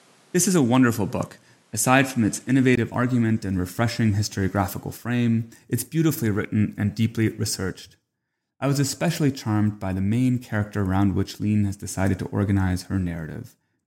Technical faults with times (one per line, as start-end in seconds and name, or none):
0.00-2.77 input switched to a poorer device